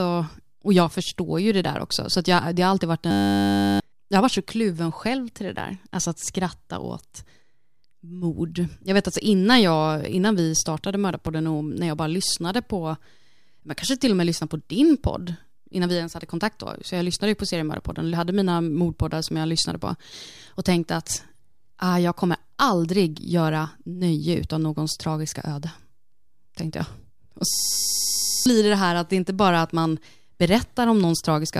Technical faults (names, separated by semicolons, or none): system hang loop